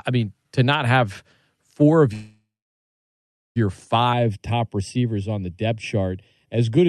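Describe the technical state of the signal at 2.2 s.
A call audio freeze runs from 2.13 to 3.58 s, just after "not have four of". Packets were likely delayed and the jitter buffer emptied. The last sound stretches into a fading buzz or hiss, then about 1.1 s of silence, and the audio resumes with nothing lost.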